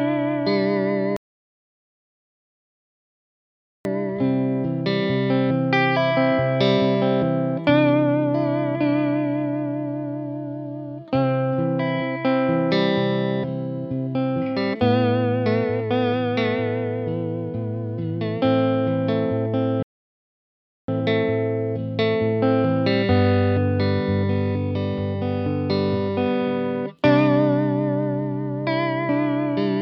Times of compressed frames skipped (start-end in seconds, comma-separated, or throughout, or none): none